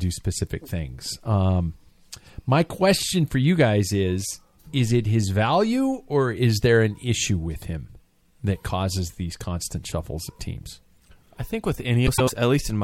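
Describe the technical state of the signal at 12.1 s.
At 12.1 s the signal is inside a frames out of order fault running from about 12.07 to 12.30 s, just after "teams I think with". Two adjacent blocks of roughly 104.5 ms each were decoded in swapped order, consistent with runs of about four frames, so the stretch plays its second half first. The result is a brief garbled flutter. No time is lost.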